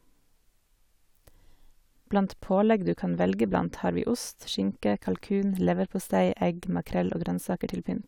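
A speech clip, and nothing in it is technically wrong.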